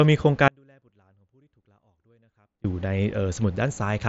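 At 0.48 s the speech cuts out abruptly and stays gone until 2.64 s, an audio dropout to a faint residue of about 2.2 s. Only a faint trace around 35 dB down remains, likely a lost signal while the path stayed live, with band-limiting near 7.7 kHz from the mSBC headset link.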